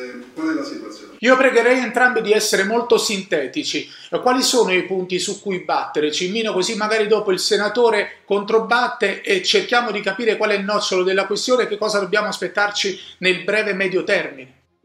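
No technical faults are audible.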